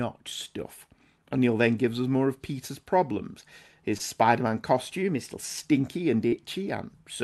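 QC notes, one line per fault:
3.97 s and 6.28 to 6.34 s, short concealed packet loss: about 20 ms and then 40 ms of audio arrived too late to decode. The receiver extrapolated the preceding sound to fill each gap and crossfaded back, leaving a brief smear or wobble.
4.94 to 5.61 s, drift correction step: speed rises by about 6% and pitch by roughly a semitone, then both snap back. This is likely a clock-matching resampler changing rate in one jump to correct its buffer level.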